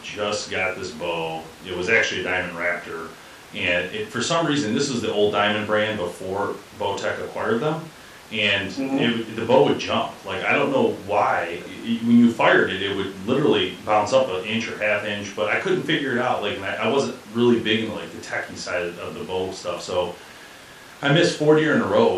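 No technical faults are audible anywhere in the speech recording.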